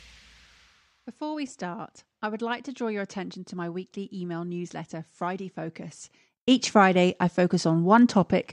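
Speech clip, no faults heard.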